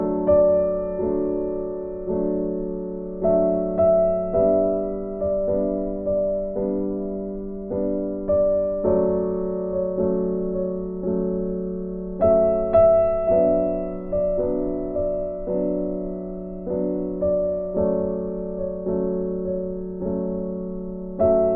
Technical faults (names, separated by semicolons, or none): none